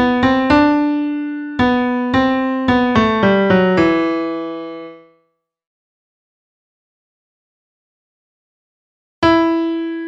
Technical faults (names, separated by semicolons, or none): none